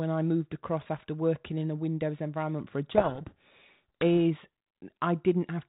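From 2.92 to 4.03 s, the speech is buried in harsh distortion. This is a codec payload misread. The G.726 code words arrive with their bits in the wrong order. The decoder still accepts each frame. But it builds its adaptive prediction from scrambled difference values, so the output turns to rasping noise. Normal sound returns at 4.03 s. Outside that span, the light coding noise fits a 32 kbit/s G.726 link.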